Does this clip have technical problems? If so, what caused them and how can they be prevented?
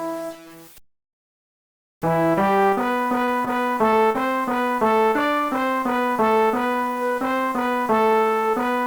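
Yes. There are three kinds of fault.

Low bit depth without dither runs through the whole clip. A grainy distortion follows the sound and changes with it. Quiet passages turn gritty. The error sits roughly 25 dB below the signal. This likely comes from the audio being cut to very few bits, about 6, by simple truncation with no dither. The error therefore tracks the waveform instead of staying as steady hiss. Prevent it by keeping at least 16 bits and adding dither whenever bit depth is reduced.

Short stalls from a late packet occur at 2.69 to 2.73 s, 2.75 to 2.79 s and 3.45 to 3.49 s. At each one, a sound is held a little too long, with a slight buzz or dip. The receiver's jitter buffer ran empty. It stretched the last sound for 20, 15 and 16 ms. Then it resumed where it left off, so nothing is lost. Prevent it with a larger or adaptive jitter buffer and a steadier network path.

Short concealed packet loss occurs at 3.25 to 3.29 s, 3.91 to 3.94 s and 4.12 to 4.16 s. 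Each one is a brief smear or wobble. About 20 ms of audio never arrived in time at each point. The receiver filled the gap by extending the preceding sound. It then blended back into the real signal. Prevent it with forward error correction or redundant packets, and by reducing network loss.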